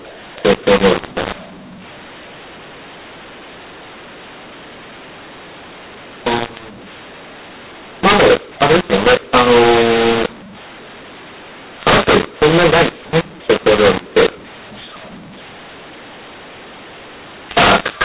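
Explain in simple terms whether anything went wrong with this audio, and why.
Something went wrong for the entire clip: the speech was saved using A-law telephone coding but played back as mu-law, a mu-law and A-law mix-up. Loud and quiet moments come out the wrong size, so the speech sounds harsh and distorted, and pauses fill with hiss.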